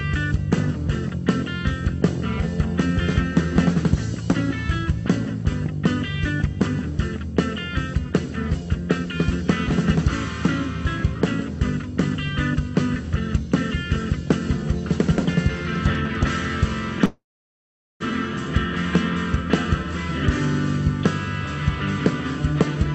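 At 17.05 s the audio stops moving forward. The last sound is held briefly as a fading buzz or hiss. Then it drops into about 0.8 s of silence. At 18.03 s it picks up exactly where it left off, with nothing lost. This is a call audio freeze, likely caused by delayed packets emptying the jitter buffer. The inserted gap of about 0.95 s pushes everything after it later. The band-limited sound, topping out near 8 kHz, fits an Opus call path.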